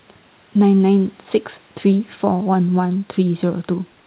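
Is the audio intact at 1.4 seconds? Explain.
Yes, the speech at 1.4 seconds is intact, with only the room noise well below it and the narrowband sound of the call path, which carries nothing above 4 kHz.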